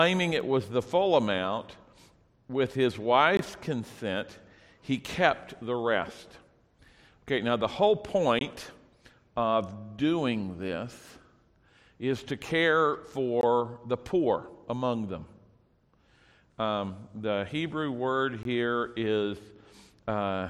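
You get four short holes, at 3.37–3.39, 8.39–8.41, 13.41–13.43 and 18.43–18.45 s, a gap between chunks every 5 s. Each join inserts 20 ms of silence, so nothing's missing, but the sound stutters briefly at each seam.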